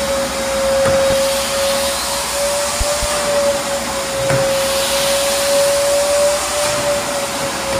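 Loud pops at 1.10 to 1.14 s and 2.81 to 3.06 s break through the audio: a single sharp pop first, then two in quick succession, each peaking roughly 10 dB above the surrounding sound, which continues underneath. The likely cause is a sudden voltage step or spike entering the signal path, such as a plug, a switch, static discharge or a driver glitch. The circuits downstream turn that step into a brief pulse heard as a pop.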